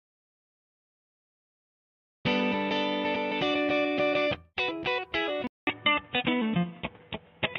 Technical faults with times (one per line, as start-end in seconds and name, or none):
5.47-7.58 input switched to a poorer device